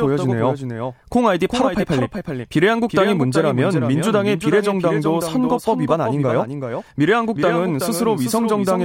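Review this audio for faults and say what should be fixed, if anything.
Doubled audio track, throughout the clip: the speech is heard twice, with a second full-band copy trailing by about 400 ms at roughly 5 dB quieter, with no decay or room colour. The likely cause is a slower second capture path or two misaligned copies in an edit. To prevent it, route each source through a single capture path and check edits for overlapping duplicate regions before export.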